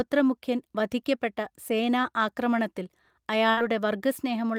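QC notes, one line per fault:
2.01–2.05 s, short concealed packet loss: About 20 ms of the call audio arrived too late for the decoder, and the receiver covered roughly 16 ms of it by extending the preceding sound, following its pitch if voiced or substituting shaped noise if not, before crossfading back into the real signal. The result is a brief smear or wobble in the speech. Any short consonant falling in that window may be lost.
3.51–3.59 s, burst of packet loss: About 60 ms of audio failed to arrive in time. The receiver filled roughly 58 ms by continuing the last sound and reducing its level as the gap went on, so it comes across as a held buzz if voiced or a fading hiss otherwise. The speech then resumes later, with the lost segment absent.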